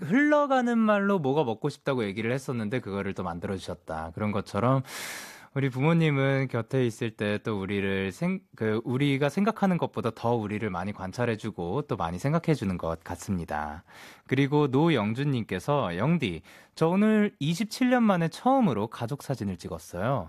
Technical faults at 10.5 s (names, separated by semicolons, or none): none